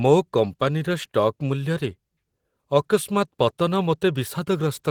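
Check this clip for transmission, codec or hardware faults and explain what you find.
One codec fault runs through the whole clip. Opus voice compression: hybrid-mode coding with coarse excitation, consistent with roughly 16 kbps, makes the speech plainly hoarse and slightly robotic throughout, despite fullband bandwidth.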